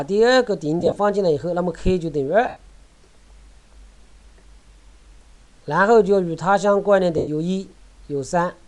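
Lost LE Audio frames at 0.80–0.98 s, 2.48–2.57 s and 7.17–7.28 s: the decoder patched each gap with the last spectrum under random signs, so the sound smears into noisy hiss for about 105, 82 and 97 ms. The first loss is scattered in short bursts over 180 ms, beneath light lossy compression.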